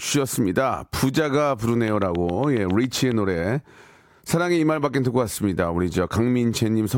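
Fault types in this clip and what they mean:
Train of clicks: from 1.88 to 3.13 s, about ten evenly spaced, same-shaped clicks tick over the speech at roughly 7.3 per second, peaking about 10 dB above it, likely from electrical interference or a faulty connection or power supply injecting repeated pulses.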